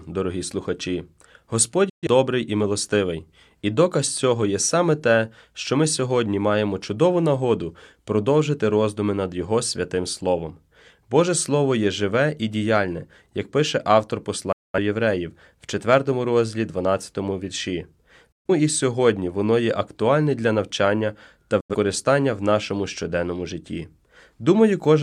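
Speech that drops into abrupt silent holes four times: at 1.89 s, just before "і милостивий і доказ"; at 14.52 s; at 18.32 s, ahead of "і сьогодні воно є"; and at 21.60 s, between "актуальне для навчання та" and "в нашому щоденному житті". Each gap is a quick 8 ms fade to nothing, lasting roughly 85 to 210 ms. This is digital broadcast dropout: the receiver muted on corrupted frames, and the gap lengths fit two to five lost frames, whose content is gone.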